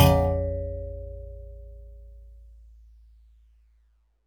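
No technical faults can be heard anywhere in this sound.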